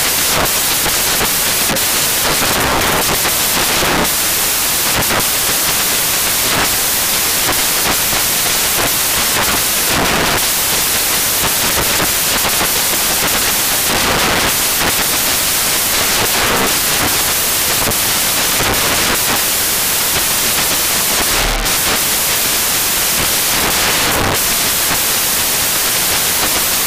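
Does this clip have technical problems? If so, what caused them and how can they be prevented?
Yes. Throughout the clip, the samples are built from the wrong bytes: the reader misassembles each sample, so fast-changing low-order bits become the dominant part of every value. Unlike ordinary hiss under a recording, this is loud, harsh broadband noise, close to white on loud passages. Prevent it by declaring and checking byte order, sample width and alignment when reading or writing raw audio.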